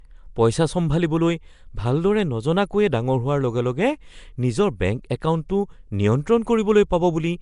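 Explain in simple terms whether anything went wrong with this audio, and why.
The speech has a rough, hissy haze around it and a smeared, underwater quality from start to finish, with nothing above about 10.6 kHz. The likely cause is Nellymoser compression, the old Flash microphone codec, which filled the weaker sounds it couldn't afford to keep with noise.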